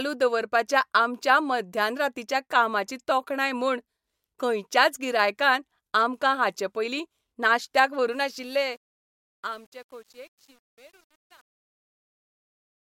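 Truncation distortion on a fade runs from 8.11 s to 12.93 s in this speech clip, right after "आमकां हाचेपयलीं नाश्त्याक व्हरू". As the fade-out from about 8 s lowers the level, the undithered signal collapses into coarse steps, consistent with roughly 9-bit resolution, turning gritty from 8.81 s onward.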